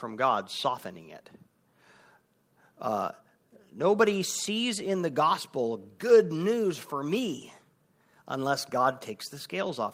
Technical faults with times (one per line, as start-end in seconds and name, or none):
none